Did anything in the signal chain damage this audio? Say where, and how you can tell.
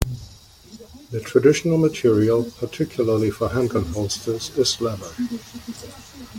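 No, nothing along the signal chain audibly damaged this speech recording, and the signal holds steady throughout with no sign of a broken stage.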